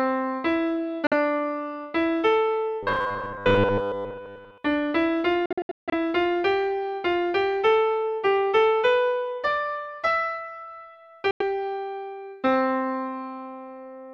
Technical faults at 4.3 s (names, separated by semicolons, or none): robotic sound from repeated short buffers